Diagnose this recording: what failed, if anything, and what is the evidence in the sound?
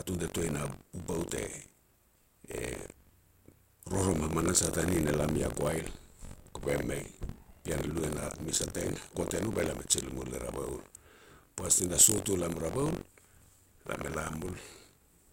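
Buffer tearing runs throughout the speech, heard as a robotic rattle at 46.9 Hz, present only while sound is playing. It arises at the driver or buffer stage, which fits a 1024-sample buffer. Writer and reader cross each period, leaving roughly a sixth of every buffer holding audio about 70 ms stale, with hard joins.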